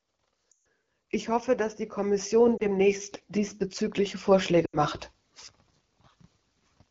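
Lost AMR speech frames hit at 0.51–0.61 s, 2.58–2.63 s and 4.65–4.78 s. The decoder repeats the last good frame at falling gain, so the speech drops to near silence within two frames, with only a brief dip at 2.58 s. On a spectrogram this shows as frozen, dimming bands; in the waveform the envelope shrinks, then returns weakly.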